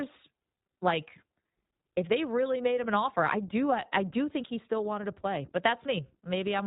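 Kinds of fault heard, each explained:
iLBC codec: the speech passes through a narrowband voice codec that codes each short frame on its own, leaving a plainly rough, synthetic grain consistent with 20 ms frames near 15 kbps. A spectrogram shows a flat ceiling with nothing above 4 kHz.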